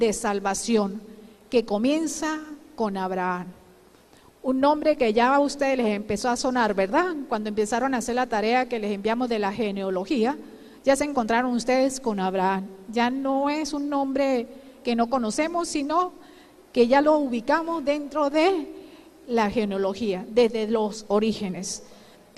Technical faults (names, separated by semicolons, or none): none